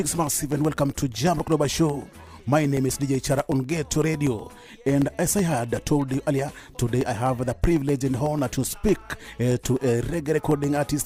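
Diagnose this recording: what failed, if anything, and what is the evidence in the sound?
A steady train of small ticks runs from 0.15 s to 10.89 s, spaced every 0.125 s (eight per second), and heard only where there is signal. These are periodic USB or driver dropouts at the driver or buffer stage: something blocks the USB bus or audio driver on a fixed schedule, and each time about a millisecond of audio is lost and replaced with silence. That gives around a hundred evenly spaced gaps.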